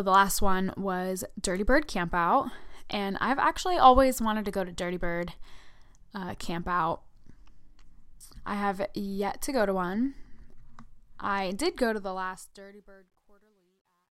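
From 11.74 s to the end at 14.18 s, the fade-out stage kept too few bits and added no dither, which fits a 12-bit volume stage. As the speech fades from around 11.7 s, the tail shows truncation distortion on a fade: the waveform collapses into coarse square steps. It turns gritty first, then worst from 12.84 s to 14.19 s.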